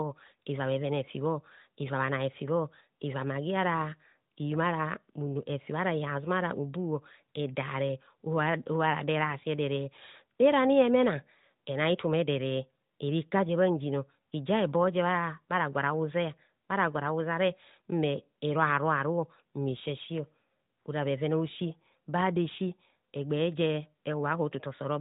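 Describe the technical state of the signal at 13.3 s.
At 13.3 s the speech is intact, with no fault to be heard beyond the band-limited sound of the AMR narrowband mobile codec it passes through.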